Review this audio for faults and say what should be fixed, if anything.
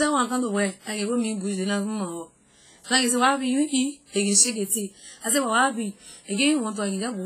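Heavy WMA compression damage runs through the whole speech clip. The sound rings and smears. A washy hiss rises and falls with the speech. Nothing is present above 15.3 kHz. The likely cause is a transform encoder using long blocks. Its quantisation noise spreads over tens of milliseconds around each sound. Weak spectral detail is zeroed out. The damage fits a low bitrate of around 24 kbps. To prevent it, record and keep a lossless master, and encode at a higher bitrate.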